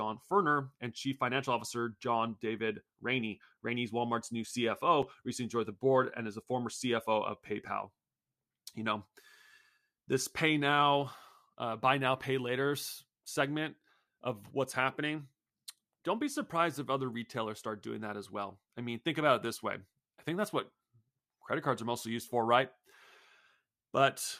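Speech, with a block of digital silence at 5.02 s, just before "recently joined": a hard 5.3 ms dropout to silence, heard as a tick rather than a gap, which fits an unfilled 256-sample output buffer.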